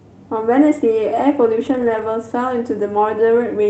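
From 1.65 to 2.03 s there is a lost packet rebuilt from error correction. Several packets went missing in this stretch. Each following packet carried a low-bitrate copy of the lost one, and the decoder played those copies instead. That covers about 200 ms of the speech, so there is no silence. The rebuilt frames sound rougher and grainier than the audio around them, with added noise.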